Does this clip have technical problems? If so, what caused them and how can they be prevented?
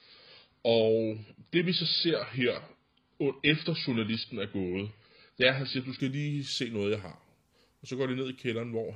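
Yes. From 0 to 6.0 s the speech sounds dull and smeary with nothing above 5 kHz, then sharpens abruptly at "lige se noget jeg": an adaptive stream starting at a low bitrate, consistent with roughly 16 kbit/s AAC stepping up to about 96 kbit/s. Starting playback on a higher-bitrate rendition, or buffering briefly before playing, would prevent it.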